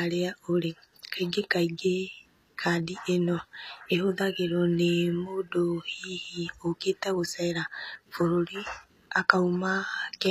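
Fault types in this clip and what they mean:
HE-AAC compression: The speech carries plainly audible coding damage throughout. The upper band sounds bright but synthetic, which is the likely sign of HE-AAC, where only the lower spectrum is really coded and the treble is rebuilt by copying lower bands upward under a rough envelope. Those borrowed harmonics don't line up, so s sounds come out gritty or lispy. Nothing sits above about 14.9 kHz, and the damage fits a low bitrate around 24 kbps.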